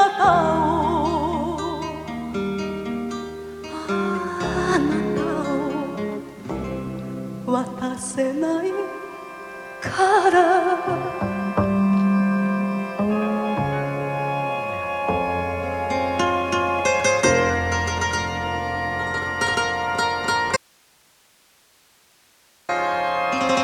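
At 20.57 s the audio drops out to a faint residue: the signal cuts abruptly and for about 2.1 s, until 22.69 s, only hiss remains, roughly 35 dB below the normal level. The likely cause is a lost source while the downstream path stayed live.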